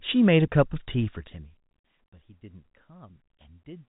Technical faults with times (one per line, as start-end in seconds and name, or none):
none